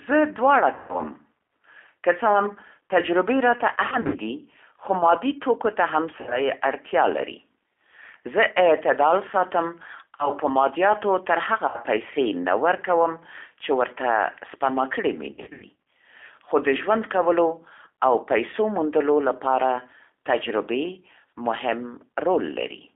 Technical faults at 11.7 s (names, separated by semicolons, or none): G.729 codec; VoIP packet loss concealed by the speech codec